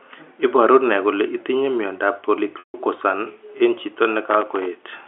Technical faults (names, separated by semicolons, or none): packet loss with pitch repetition; processor overload crackle